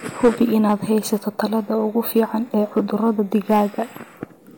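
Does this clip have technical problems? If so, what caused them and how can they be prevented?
Yes, there's hard clipping in five spots of this speech: 0.24–0.73 s, 1.13–1.45 s (just before "tallaalada ugu"), 2.16–2.23 s (right after those words), 2.77–3.10 s and 3.51–3.62 s. The level there exceeds what the chain can pass, by about 7 dB in the first stretch and about 1 to 4 dB in the others. So the peaks get sliced flat and throw off harsh high harmonics you hear as crackly fuzz. Set the input gain lower so a few dB of headroom stays free at every stage.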